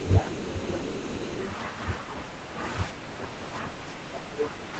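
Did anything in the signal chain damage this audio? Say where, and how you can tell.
Yes. The damage happens at the call-processing stage, in the echo canceller.

Other side's voice leaking through: from the start to 1.5 s, a second, fainter voice sits under the main talker. It is roughly 30 dB down, so it is quiet but audible. The likely cause is far-end audio from the device's loudspeaker reaching the microphone, with the echo canceller failing to remove all of it. What survives comes through as residual echo.

Speech suppressed in double talk: the main talker's level dips four times. This happens at 0.04 to 0.13 s, 0.32 to 0.7 s, 1.11 to 1.19 s and 3.23 to 3.43 s. The deepest dip is about 30 dB, in the 0.32 s stretch. The others are around 10 to 15 dB. These dips likely come from the canceller hearing both sides at once. It could not separate its own talker from the echo, so it pulled everything down.

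Background gated by the echo canceller: from 3.76 to 4.12 s, the room sound drops by about 8 dB for roughly 300 ms, then comes back. Here the canceller clamps the microphone hard while the loudspeaker plays. The room sound is taken down with the echo. It returns once the canceller releases, which gives the noise floor an audible hole.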